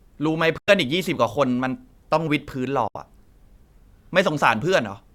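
Speech with two short silent holes, at 0.58 to 0.69 s and again at 2.88 to 2.97 s, each lasting about a tenth of a second. They are likely Bluetooth dropouts, with packets missing the headphones' deadline. The sound cuts out and resumes further along, as if it kept playing through the gap. Unlike a stall or buffer underrun, nothing is delayed or repeated, and the timing after each hole stays intact.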